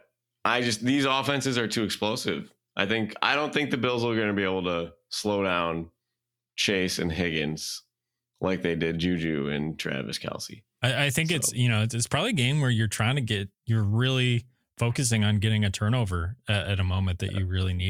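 Nothing stood out as a fault when listening to this speech recording.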